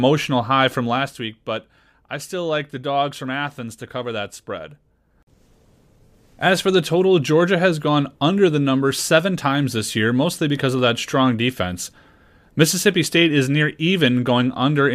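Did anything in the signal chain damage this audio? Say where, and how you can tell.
Yes. Zipper noise from the gain stage, applied in unsmoothed steps: from 0.79 to 1.30 s the speech drops by about 10 dB, with a fine ticking at around 50 steps a second. Unlike a smooth fade, the level moves in audible unsmoothed increments, each adding a click.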